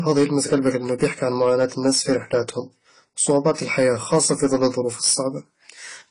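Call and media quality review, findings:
Hard clipping, throughout the speech: peaks driven about 6 dB past what a gain or converter stage can pass, so a small share of samples is cut flat, adding high harmonics as distortion on louder syllables. Tracks signal level, unlike codec damage.

AAC compression, throughout: plainly audible codec damage, dull and smeared, nothing above 10 kHz, warbling or fizzy texture on sustained sounds and sibilants. Points to a likely low-bitrate AAC-LC encode, around 24 kbps. Band limit stays fixed regardless of loudness, unlike the clipping.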